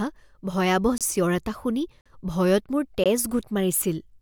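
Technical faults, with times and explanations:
0.98–1.01 s, 2.01–2.06 s, 3.04–3.06 s: gap between stream segments. Hard-edged silences of about 27, 47 and 19 ms recur at 1 s intervals, the first just before "চিঞৰ এটা শুনি" and the second just after it. Segment timestamps leave holes that the player fills with silence. No audio is lost.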